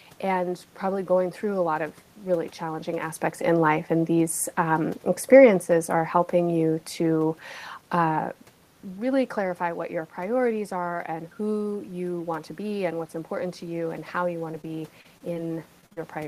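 From 11.05 s to the end, automatic gain is rising after the input fell by about 10 dB; the gain climbs gradually, swelling speech and room noise together. Between 14.51 s and 15.98 s, short concealed packet loss appears at 14.51, 14.61, 15.01, 15.18, 15.34, 15.81, 15.86 and 15.93 s. Gaps of 20 to 40 ms were filled by extending prior sound, heard as brief smears or wobbles.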